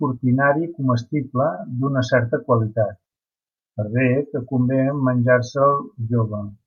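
No technical faults are audible.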